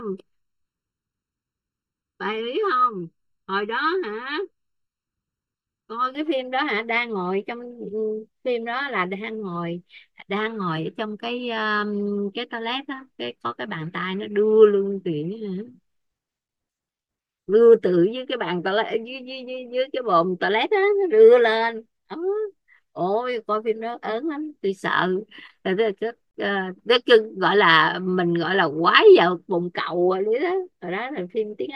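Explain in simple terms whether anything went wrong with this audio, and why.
Channel delay (comb filtering) affects the first 6.15 seconds of this speech. One channel arrives less than a millisecond behind the other. When both are mixed into one, certain evenly spaced pitches cancel, starting around 700 Hz, so the speech sounds hollow and phasey.

A gap at a join of encoded pieces appears at 26.31 to 26.35 s. The speech breaks off in a gap of about 35 ms and then picks up where it stopped. Two separately encoded sections were joined without trimming the silence and padding each one carries at its edges.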